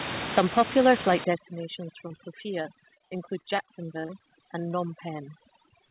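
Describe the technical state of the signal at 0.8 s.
At 0.8 s you're in clipping from 0.37 to 1.14 s: flattened peaks with a harsh crackle, likely microphone overload pushing input about 8 dB past the converter's ceiling.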